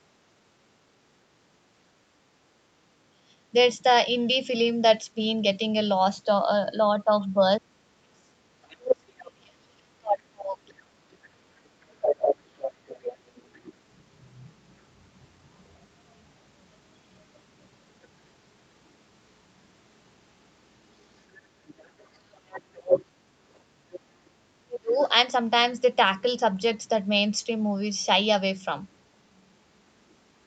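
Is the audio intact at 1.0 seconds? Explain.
Yes, the speech at 1.0 seconds is intact, with nothing there beyond the normal sound of a call path whose content stops at about 8 kHz.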